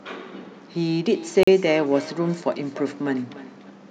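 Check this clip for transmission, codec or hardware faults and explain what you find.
Two faults are present in the speech: a feedback echo between two devices and a block of digital silence.

From 1.11 s to 3.8 s there is a feedback echo between two devices. Two devices on the same call share a room. One plays what the other's microphone sent, and that microphone picks it up again. Each device's echo canceller only removes its own playback, so the sound returns. The repeats come back roughly every 300 ms. At their loudest they sit about 18 dB below the speech, with a thin, ringing tone.

At 1.43 s to 1.47 s there is a block of digital silence, 41 ms long. A run of samples was replaced by zeros. The likely cause is the output buffer not being filled in time. The sound drops to dead silence and returns with no fade. At this length it is heard as a short hole rather than a single tick.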